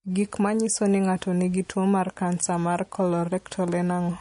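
Throughout, the speech stops at 10.6 kHz, a hard spectrogram ceiling, with layered watery smearing: likely transcoding between lossy codecs, a low-bitrate MP3 re-encoded as WMA.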